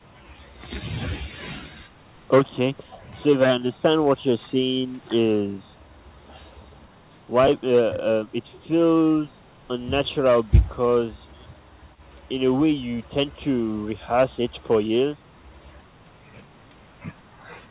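Nothing goes wrong anywhere in this speech, which simply carries the narrow, phone-like band of a G.711 call with nothing much above 4 kHz.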